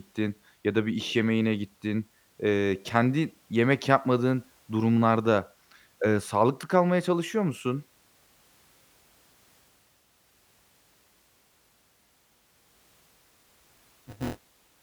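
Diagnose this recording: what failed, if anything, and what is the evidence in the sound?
Buffer tearing at the driver or buffer stage: from 13.16 s to the end, the speech takes on a steady robotic buzz near 200 Hz. Writer and reader pointers have slipped, so about a fifth of each buffer period replays audio from roughly 20 ms earlier, with hard joins.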